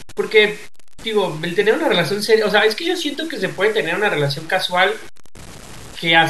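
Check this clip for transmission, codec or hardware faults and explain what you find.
One fault runs through the whole speech clip. Low bit depth without dither is the likely cause. Gritty distortion tracks the speech, about 20 dB below it, which fits truncation to roughly 6 bits.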